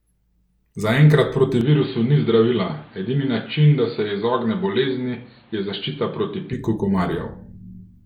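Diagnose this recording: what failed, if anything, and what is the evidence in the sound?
Between 1.61 s and 6.53 s the speech turns dull, with nothing above 4.6 kHz. It drops about 5 dB and gains new noise roughly 30 dB down, with no gap. This is likely an input switched to a poorer device at the driver stage. A spectrogram shows a flat ceiling, and the waveform a shrunken envelope.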